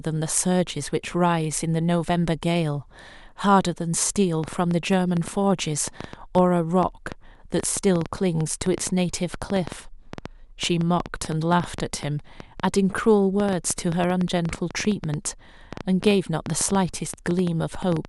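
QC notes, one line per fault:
4.44 to 18.06 s, train of clicks: a run of about a hundred short, similar pops arrives at roughly 6.3 per second with uneven spacing, continuing through pauses and standing well above the speech, peaking around 10 dB over it. The likely source is electrical interference or a faulty connection or power supply injecting repeated pulses. On a spectrogram they show as thin broadband vertical lines at irregular gaps; the waveform shows narrow spikes poking above the speech envelope.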